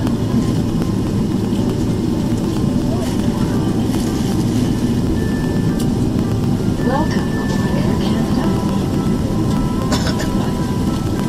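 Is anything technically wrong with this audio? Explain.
Yes: periodic USB or driver dropouts run from 0.07 s to 11.2 s. Every 0.125 s a background task stalls the audio path, silencing roughly half a millisecond and producing clockwork ticks, about a hundred, unlike randomly timed glitches.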